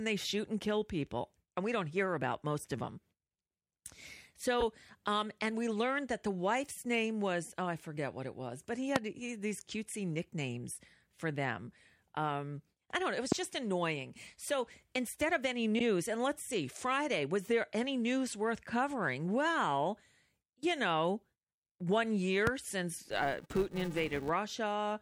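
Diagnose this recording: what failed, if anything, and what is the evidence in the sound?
Repeated frames, at the codec or storage stage. The sound stutters twice. From 4.60 to 4.63 s, one 24 ms block plays again. From 15.78 to 15.83 s, between "instead of any" and "and let's see", a 48 ms stretch repeats once. Each repeat lengthens the audio by that amount.

Loud pops, in the analogue wiring. There are three sharp pops on top of the speech, and the speech carries on beneath them. The first runs from 8.96 to 8.98 s, just after "it was but he", at about 25 dB above the signal. The others come at 13.32 to 13.34 s and at 22.47 to 22.49 s, after "you know one", each at about 20 dB. A likely cause is a voltage step from a plug, a switch or static.

Filter restarted on every block, in the processing stage. From 23.03 to 24.30 s, a buzz at 345 Hz rides on the speech and follows its level. Each block starts from silence and adds a small tick. 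That rate fits a 128-sample block.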